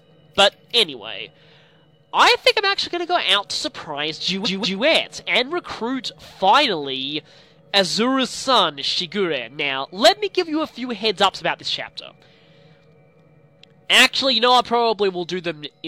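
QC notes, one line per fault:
4.42–4.79 s, repeated frames: a 186 ms block, consistent with four compressed frames, was played twice more, heard as a stutter that adds 0.37 s.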